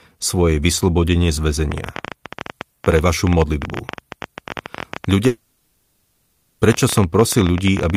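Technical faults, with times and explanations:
1.72 s to the end: train of clicks. A rapid ticking of roughly 14 pulses per second at an uneven pace sits over the speech and through its pauses, peaking about 10 dB above the signal. The repeated, similar-shaped pulses likely come from electrical interference or a faulty connection or power supply.
5.27 to 6.61 s: long network dropout. About 1.32 s of audio never arrived, and the receiver filled the entire gap by extending the last sound into a synthetic buzzy hiss rather than silence. Speech resumes afterwards with that portion lost, likely through network packet loss.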